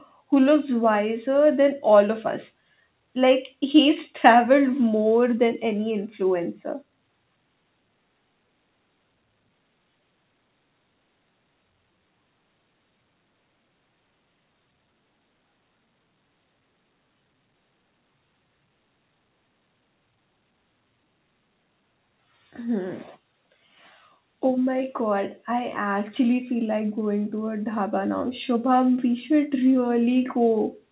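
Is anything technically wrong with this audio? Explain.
No, nothing is technically wrong with this speech recording.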